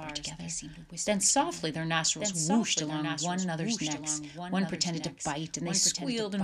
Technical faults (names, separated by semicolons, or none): doubled audio track